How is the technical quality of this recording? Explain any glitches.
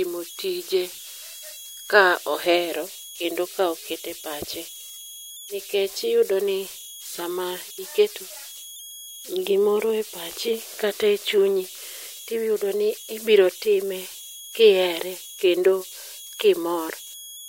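The recording has one converter fault that lasts its full length. Converter idle tones run throughout: an undithered delta-sigma converter falls into repeating bit patterns at low levels. This gives a whistle around 3 kHz, about 18 dB below the speech, in pauses, and grainy noise under quiet parts. Unlike mains hum, it sits high, with pitch set by input offset.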